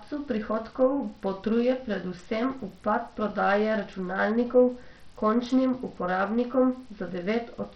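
Throughout the speech, heavy coding damage is audible, most likely from Bluetooth SBC compression at a low bitrate, consistent with roughly 64 kbps. Nothing reaches above 14.8 kHz. The starved upper sub-bands make the treble flicker, and coarse quantisation adds gritty noise and aliasing.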